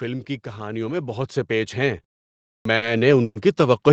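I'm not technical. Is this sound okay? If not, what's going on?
No, there are a few problems here.

From 0.57 s right to the end there's automatic gain rising: the call's volume control decided things were too quiet and slowly turned itself up, so the voice and the background both creep louder together over those few seconds.

Between 2.03 and 2.84 s you get repeated stalls (stutter). The incoming audio kept arriving a bit late, so the receiver ran dry six times and stretched the last bit of sound to cover each wait, the longest about 60 ms. Nothing's missing, but it drags and stumbles.

At 2.47 s there's a clipped start after a pause. After about half a second of quiet, the playback side had dozed off and needed a moment to wake, so roughly the first 0.18 s of the next bit of speech is swallowed and it begins abruptly.

Around 3.24 to 3.37 s the sound briefly hangs, a smeared held tone with a tiny moment of silence, then carries on where it left off. 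That's a call audio freeze, likely from the audio getting held up on the way for about a tenth of a second.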